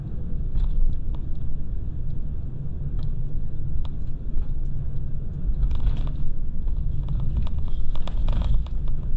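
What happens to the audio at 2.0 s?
At 2.0 s the audio carries a wrong sample rate fault, and it runs through the whole clip rather than starting there. The samples are played back at about half the rate they were captured at, with no conversion. That fits material recorded at 44.1 kHz being clocked out near 22 kHz. Everything runs at half speed. Pitch drops by 12 semitones, a full octave. The sound comes out low, slow and dragged.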